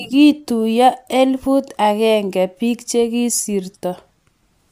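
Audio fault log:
No fault heard anywhere in the speech; nothing to log.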